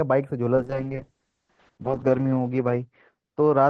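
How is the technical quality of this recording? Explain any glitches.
The recording has one clear fault: a call bitrate drop that begins early and lasts to the end.

From 0.57 s, the audio, which had been passing cleanly through an Opus call path with content up to 12 kHz, degrades sharply. The bandwidth estimate fell, so the encoder was starved of bits, consistent with a fall from about 32 kbps to around 6 kbps. The top end narrows to 8 kHz, and for about 1.45 s at the worst point the speech turns muffled and rough, with coarse, watery coding texture.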